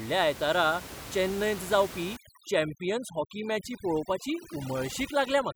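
Overdone noise removal from 2.17 s, after "चेन्नयंत जावपी", to the end. Bands near the noise estimate are suppressed, leaving a lowered background broken into twinkling specks.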